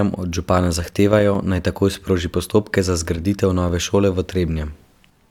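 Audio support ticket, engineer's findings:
No audible faults found in this speech recording.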